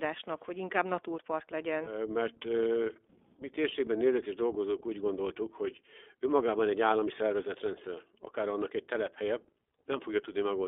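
From start to finish the speech carries plainly audible iLBC codec damage: a band of about 250 Hz to 3.5 kHz, with a rough, synthetic edge that fits the 20 ms, 15.2 kbps mode.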